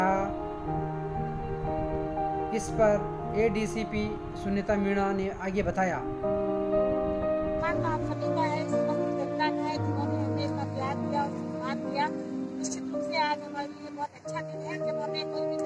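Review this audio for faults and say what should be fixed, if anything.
No faults can be heard anywhere in this audio, so nothing needs fixing. It can be left as it is.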